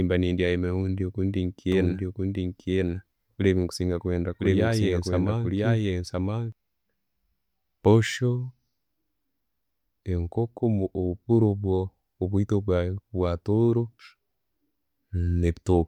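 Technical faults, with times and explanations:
1.72–6.52 s: doubled audio track. A dry, full-band copy of the speech runs about a second behind at roughly equal loudness, likely from a second, slower capture path. The spectrogram shows each harmonic pattern repeated, shifted right, starting and stopping abruptly.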